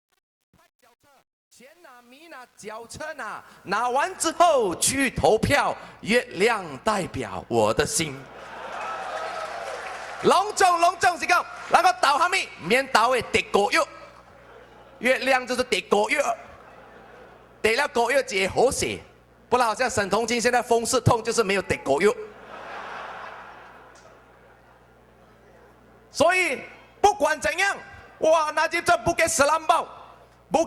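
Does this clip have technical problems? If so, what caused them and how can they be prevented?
Yes. A mains buzz runs through the whole clip at roughly 35 dB below the signal, built on 60 Hz. Switching spikes from a dimmer, a rectifier or an unshielded connection enter the audio path twice per mains cycle, so the buzz carries a stack of 60 Hz harmonics extending into the kilohertz range and sounds raspy rather than like a pure hum. Prevent it by using shielded, balanced cabling and keeping the signal chain away from dimmers and switching supplies.

Truncation distortion on a fade affects the opening of the clip, from 0.0 to 4.15 s, and is worst between 0.0 and 3.41 s. The stepped, gritty texture on the fade points to a gain stage working at about 9-bit resolution without dither. As the level falls toward the smallest available step, the waveform is reduced to a few coarse square levels, and that quantisation is heard as grit riding on the sound. 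Prevent it by processing fades at high bit depth and applying dither whenever the word length is reduced.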